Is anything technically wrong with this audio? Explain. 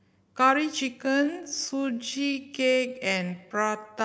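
Yes. From 0.99 s to the end of the clip, the speech turns into a time-stretched section. The pace suddenly drops to about 0.6 times normal speed, yet the pitch stays the same. This was likely done by software lengthening the audio to fill a set duration. It repeats short slices to hold the pitch steady while adding time. Those repeated pieces make the slowed speech drag.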